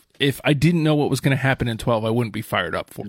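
At 2.98 to 3.04 s, near the end of the speech, there is damaged data in the compressed stream. Some bytes there were wrong. The decoder misread the frames, lost sync and hunted for the next header. It sounds like a brief chirp, squawk, click or short hole.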